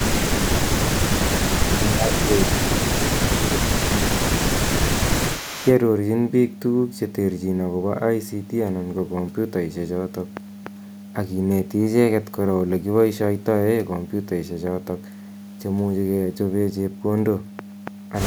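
From 0.0 to 5.73 s an echo leak runs under the speech: a faint copy trails the voice by 262 ms, roughly 15 dB down. It is likely a loudspeaker echo the canceller failed to remove. On a spectrogram it appears as weak, delayed duplicates of the speech, shifted right. Within that stretch, speech suppressed in double talk hits at 0.0–0.52, 1.58–2.3, 2.67–3.73 and 3.89–4.53 s. The voice dips by around 10 dB, likely because the canceller ducked both talkers at once. The waveform shows notched envelope gaps.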